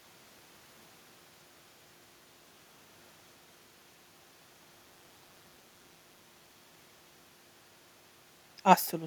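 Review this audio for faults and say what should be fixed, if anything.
From 4.84 to 6.25 s an overlap-add ripple gives the speech a metallic buzz about 6 dB deep near 200 Hz, the frame rate. Windowed frames were recombined with an overlap whose gains do not sum to a constant. Prevent it with a window and hop that sum to constant gain.

Between 8.86 and 8.91 s an echo leak appears as a faint, delayed copy of the speech, arriving 222 ms late and roughly 35 dB below it. Its likely cause is an echo canceller that did not fully remove loudspeaker pickup. Prevent it by retuning that canceller's tail length and adaptation.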